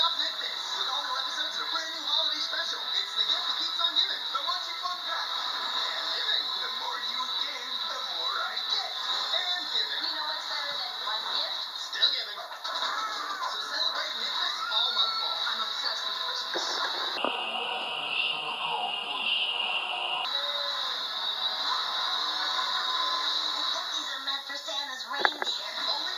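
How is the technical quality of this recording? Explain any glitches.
There is one glitch. From 17.18 to 20.25 s the sound drops into a slow, low drag, running at 0.726 times normal speed and about 5.5 semitones flat. This is a wrong sample rate fault: samples were played back without conversion at a lower rate than they were recorded at, which fits 44.1 kHz material played at 32 kHz, so pitch and tempo sink together.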